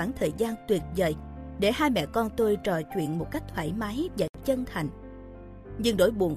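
A gap at a join of encoded pieces opens at 4.28 s and runs 67 ms, to 4.34 s. Separately encoded segments were joined untrimmed, leaving encoder delay and last-frame padding as silence. Its edges are smeared, and the sound resumes where it stopped.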